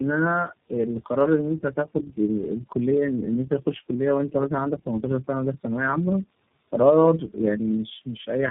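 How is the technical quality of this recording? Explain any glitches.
Quality is poor throughout: rough, muffled and warbly, with nothing above 3.8 kHz. That is tandem speech coding, which fits three low-rate speech codecs in a row, each re-coding its predecessor's already degraded output.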